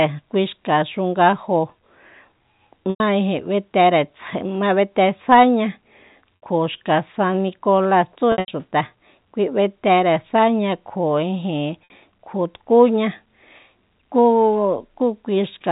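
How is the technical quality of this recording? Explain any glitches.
The speech travels through a G.711 telephone channel, with nothing above 4 kHz and a faint hiss that follows the level. Four short glitches come from packet loss with pitch repetition.

At 2.9, 6.36, 8.32 and 11.84 s, about 100, 60, 140 (scattered, longest run 80 ms) and 60 ms of audio went missing. The receiver looped the last pitch period to fill each gap, fading it out over about 50 ms, so the shorter gaps sound like a briefly held, buzzy tone and the longer ones fade into silence before the speech returns with a short cross-fade, not the hard silence or click of a plain dropout.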